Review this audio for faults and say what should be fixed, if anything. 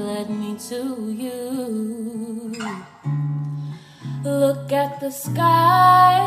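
Nothing to fix: no faults found anywhere in the clip.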